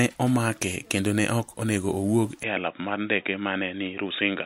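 At 2.43 s, just after "ok onego owuok e", the input likely switched to a poorer device. With no gap at the switch and the level roughly unchanged, the speech turns dull and boxy through to the end, with nothing above 3.8 kHz and a faint new noise floor.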